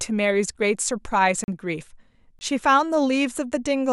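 Speech with two blocks of digital silence, at 1.44–1.48 s (40 ms) and 2.39–2.41 s (20 ms). Each drops to silence and returns without a fade. The waveform shows flat, near-silent gaps, and the spectrogram shows blank strips.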